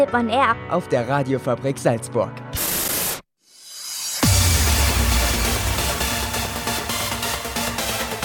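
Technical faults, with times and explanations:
Nothing stood out on listening.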